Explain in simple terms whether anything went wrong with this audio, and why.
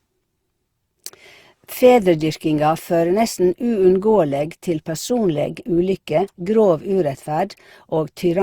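Throughout the whole clip the speech sounds swirly, hollow and smeared, with blurred starts to sounds. This is generation loss: the audio was likely compressed and decompressed around seven times, and each round added fresh distortion on top of the last.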